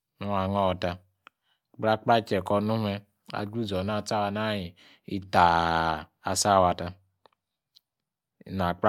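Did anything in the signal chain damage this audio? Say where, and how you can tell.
No, there is no damage from the signal chain.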